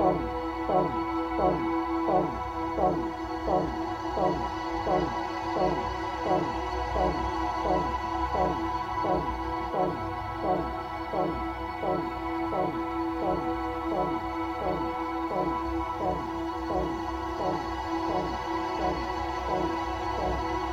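The audio was likely reduced to low bit depth without dither, truncated to what sounds like about 9 bits. Throughout the clip, the rounding error tracks the signal, roughly 40 dB below it, so quiet passages turn gritty and grainy, and the faintest parts sputter or drop out.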